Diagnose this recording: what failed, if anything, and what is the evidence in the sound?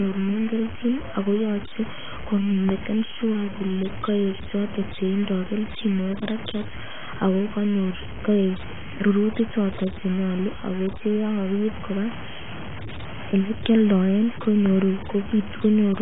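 The speech carries a grainy distortion throughout that tracks the level, with quiet passages turning gritty and decaying tails sputtering between steps. This is low bit depth without dither at the sample-format conversion stage. The error sits around 15 dB below the signal, which fits a likely truncation to about 5 bits.

The codec stage shows AAC compression. Nothing is present above 3.8 kHz, so the speech sounds dull, and the heavy quantisation adds smearing and warbling on sustained sounds. This points to AAC-LC at a bitrate around 16 kbps.

A loud pop occurs twice, each a single sharp transient sitting well above the speech, about 10 dB over its level. The first runs from 2.69 to 2.72 s, just before "shua kole koek choton", and the second from 14.66 to 14.69 s. The speech continues underneath both. The likely cause is a voltage step or driver glitch in the analogue wiring or interface.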